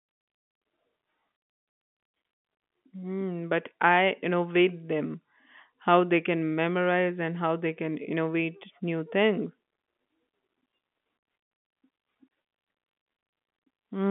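No technical faults can be heard in this speech recording. It carries the narrow sound of a G.711 telephone line, with the audio confined to roughly 150 Hz to 3.4 kHz.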